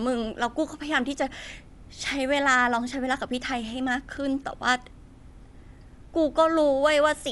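Speech, with Dolby Digital compression audible throughout. Nothing is present above about 11.4 kHz, so the voice sounds dull and band-limited, and a rough, fluttering noise clings to the tonal parts. The likely cause is a low-bitrate AC-3 encode, which fits roughly 64 kbps: the encoder narrowed the band and left many frequency lines without mantissa bits, and the decoder filled them with dither noise.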